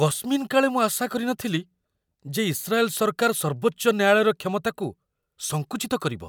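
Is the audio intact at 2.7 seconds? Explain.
Yes, the speech at 2.7 seconds plays through intact, with no dropout, click, distortion or other fault at that moment.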